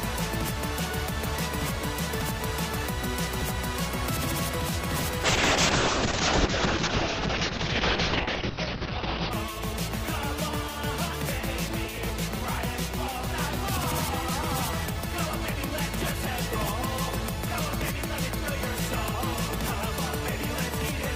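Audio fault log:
5.25–9.37 s, call bitrate drop: the encoder gets starved of bits, so the audio goes coarse and muffled, the top end falling from 20 kHz to 6 kHz, which fits roughly 6 kbps.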